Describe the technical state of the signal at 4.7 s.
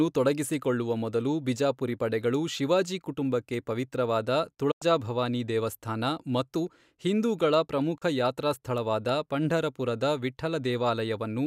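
At 4.71 to 4.82 s there's a digital broadcast dropout: the receiver mutes on bad frames, a quick fade to silence, with the sound picking up again at "ಭವಾನಿ ದೇವಸ್ಥಾನ ಮತ್ತು ಹಿಂದೂಗಳ".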